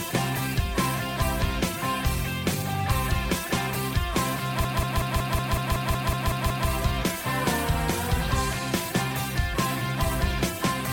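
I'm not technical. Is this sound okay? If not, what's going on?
No. From about 4.64 to 6.69 s there's a system hang loop: the computer briefly froze while the sound hardware replayed the same 0.19-second scrap 11 times, a stuttery machine-gun effect about five times a second, before the sound carries on.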